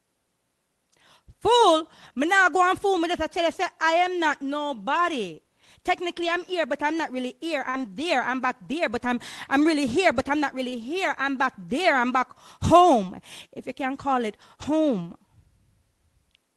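At 6.23 to 6.29 s there is a lost packet rebuilt from error correction. About 40 ms of audio went missing, which fits two 20 ms packets. The following packets carried low-bitrate copies, and the decoder played those instead. There is no gap. The sound turns briefly rougher and noisier.

At 7.69 to 7.75 s comes a short concealed packet loss. About 40 ms never arrived in time. The decoder filled it by extending the last sound and then blending back. It is heard as a short smear or wobble. From 7.73 to 7.79 s it overlaps another 40 ms stretch rebuilt from error correction, so the roughness carries on slightly longer.

At 9.03 to 9.05 s a single 20 ms rebuilt frame adds a brief grainy patch.

At 10.69 to 10.74 s a second concealed loss fills about 20 ms with continued sound, again a small smear. Within it, 10.72 to 10.74 s is rebuilt from error correction.

All of this passed through an Opus call path at 24 kbps, limited to 12 kHz.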